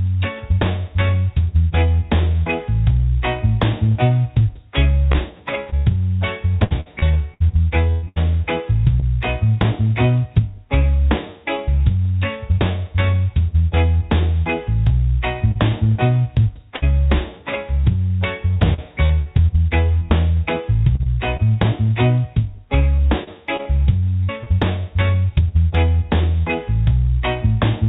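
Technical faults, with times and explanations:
5.12–9.04 s, 18.54–19.28 s, 20.96–21.46 s and 22.96–24.48 s: repeated packet loss (robotic sound). Audio keeps dropping out and each hole is patched by extending the last sound, covering about 13–18% of each stretch. The longest gap is 121 ms, in the first run. The result is choppy, with pieces missing. A spectrogram shows repeated frozen, smeared slices, and the waveform shows a stuttering, uneven envelope. As elsewhere, nothing appears above 4 kHz, which fits a G.711 A-law call path.
15.52–15.71 s: short concealed packet loss. About 40 ms never arrived, so the receiver continued the preceding sound and blended back into the real signal, heard as a brief smear or wobble. A spectrogram shows a short static patch, and the waveform shows a small kink where the audio rejoins.
16.76–16.84 s: burst of packet loss. About 60 ms in a row was lost. 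The last sound was stretched and faded out, becoming a held buzz or dying hiss before the audio resumes further on, with that portion missing. A spectrogram shows flat harmonics fading out, and the waveform shows a tapering dip.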